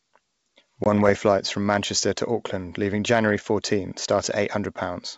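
Packet loss on an ADPCM call at 0.84 to 0.87 s cuts a 20 ms hole into the speech, about one packet's worth, filled with silence and bounded by hard edges. Because ADPCM codes each sample as a difference from a prediction, the decoder's predictor and step size drift away from the sender's during the gap. Where the G.722 wideband signal resumes, it comes back mistracked, with a brief disturbance that settles within tens of milliseconds.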